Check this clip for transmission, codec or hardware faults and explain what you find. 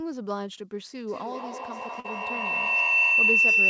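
Two faults are present in this speech clip: a feedback howl, and a short concealed packet loss inside it.

Feedback howl runs from 1.07 s to the end of the clip. Microphone-to-loudspeaker coupling gains on each pass, so the loop locks onto a tone around 3 kHz, with a loop delay of roughly 200 ms, and peaks about 13 dB above the speech.

Short concealed packet loss occurs from 2.00 to 2.07 s. About 40 ms of audio failed to arrive in time, and the decoder extrapolated the preceding signal for 42 ms before crossfading back. This is audible as a brief smear in the howl-laden passage, within a band that stops at 8 kHz.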